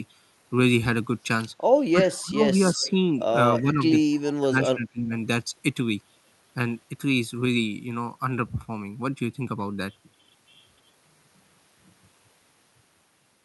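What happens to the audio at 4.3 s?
Right around there you get a faint echo leak, starting a touch earlier, from 4.11 to 4.21 s. A delayed copy of the speech comes back about 279 ms late, sitting very low, far beneath the direct sound. The likely cause is a far end on speakerphone whose echo canceller didn't fully clean up what its mic picked up and sent it back down the line.

Right after, from 4.28 to 5.14 s, the speech gets suppressed in double talk. The level ducks hard, down by something like 25 dB at its deepest, and the dips chew through most of that stretch, so the talker's voice is pushed down. That's likely the echo canceller hearing both sides at once, failing to tell the local talker from loudspeaker echo, and clamping down on everything.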